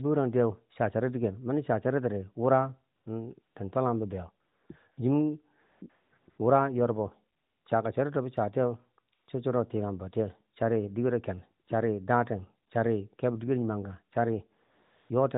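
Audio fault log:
2.96–15.10 s, AMR comfort noise: thirteen dropouts where the phone treated the pauses as silence, stopped sending speech frames and let the receiver synthesise filler noise from a rough level and spectrum estimate. Each gap swaps the real background for a smooth, steady hiss that switches in and out abruptly. They run from 20 ms blips near 11.66 and 12.68 s to a 460 ms stretch at the end, including one at 7.38–7.66 s just before "chaka charito bo". The narrowband AMR path itself sounds lightly coloured, consistent with a 12.2 kbps mode.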